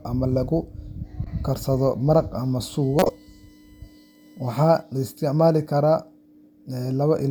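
At 1.24 to 1.27 s, just before "karsado maraq", a corrupt frame was decoded. One damaged compressed frame was played as if valid. Its misread values put energy at the wrong frequencies for that frame's length. The result is a brief, fairly quiet glitch laid over the speech.

From 2.83 to 4.83 s, a USB whine sits under the audio. Current drawn in the bus's 1 ms frames leaks into the signal through power or ground. The tone is built on 1 kHz, and its 2 kHz harmonic is the strongest part. It is a steady, fixed-pitch whine, faint and well below the speech. It lasts about two seconds.

Inside that stretch, from 2.99 to 3.09 s, another corrupt frame decode occurs. This one spans about three consecutive frames. The wrong spectral energy peaks around -5 dBFS. It is heard as a loud glitch lasting about a tenth of a second.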